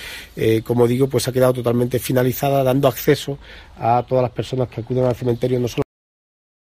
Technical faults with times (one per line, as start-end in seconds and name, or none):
3.05-5.29 de-emphasis applied wrongly
5.82-6.61 cut-off end